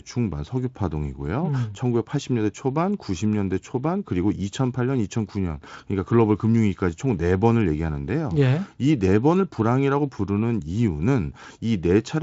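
No technical faults can be heard in this speech recording. It has passed through the Speex codec at a high setting, which shows only as a band limit with nothing above about 7.7 kHz.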